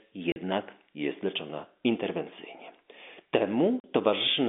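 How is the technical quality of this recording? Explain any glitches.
The speech drops out twice, in sudden gaps with hard edges, through a telephone band of roughly 200 Hz to 3.6 kHz. These gaps are packet loss filled with silence, from 0.32 to 0.36 s and from 3.80 to 3.84 s. Each hole lasts 40 ms, which fits two consecutive 20 ms packets going missing. The receiver played nothing in their place, so the waveform stops and restarts abruptly.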